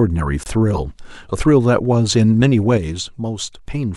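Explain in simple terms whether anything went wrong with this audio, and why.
Two things go wrong in this speech clip. First, a corrupt frame muted: from 0.41 to 0.47 s the sound cuts to dead silence for about 60 ms, then comes straight back. Part of the compressed data was damaged, the player couldn't decode it, and it played silence in its place. The gap fits two lost frames. Unlike a dropout that shifts the timing, the speech resumes exactly on schedule.

Second, a sudden gain jump: at 2.77 s the whole sound drops to a noticeably lower volume in a single instant and stays there until the clip ends. The speech and the background noise drop together, which is how you tell this from a speaker simply talking more softly. The cause is likely a volume setting applied all at once instead of being faded in smoothly.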